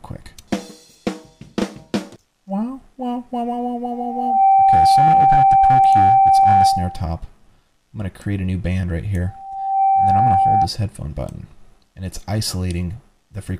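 Loudspeaker feedback squeal breaks into the audio twice, from 3.91 to 7.11 s and from 9.26 to 10.69 s, both times at the same 778 Hz tone. A microphone is picking up its own loudspeaker, and at that frequency the loop gain exceeds one. Unlike mains hum or a steady whistle, each squeal swells over about half a second to roughly 10 dB above the programme before stopping.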